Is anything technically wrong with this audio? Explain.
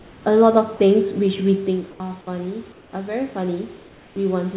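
Yes. Four kinds of fault can be heard in this speech, all within a call path whose G.711-style band limit leaves nothing above 4 kHz on a spectrogram.

Comfort noise in place of the background appears at 0 to 0.26 s, 1.91 to 2.0 s, 2.72 to 2.93 s and 3.77 to 4.16 s. The likely cause is discontinuous transmission: the receiver substituted synthetic noise for the real background in the pauses. The room's textured hiss turns flat and featureless, about 4 dB quieter in the first two gaps and about 2 dB quieter in the last two. On a spectrogram these spans show smooth, uniform grey instead of the grainy background.

Automatic gain rising runs from 0.55 s to the end. The gain control judged the input too quiet and kept turning it up, so voice and background swell together. A waveform shows the envelope and the noise floor climbing steadily. This is separate from the talker's own movement near 1.5 s.

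Sound dropped by the voice detector occurs at 0.77 to 0.8 s. The sound was likely mistaken for background and not sent, and 30 ms of it became steady noise. The waveform shows a brief gap filled with low, even noise.

The onset is clipped by the voice detector at 1.98 s. The detector was likely slow to react, so the first 20 ms of the returning speech was replaced and the word starts abruptly. On a waveform the attack jumps straight out of flat noise with no soft rise.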